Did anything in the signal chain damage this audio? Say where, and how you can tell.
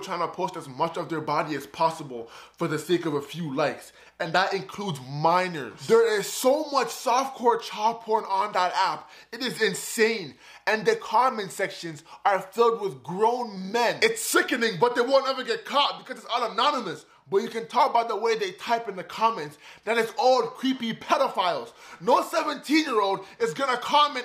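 No, nothing in the signal chain audibly damaged this audio; every stage from capture to playback passes the signal without any audible fault.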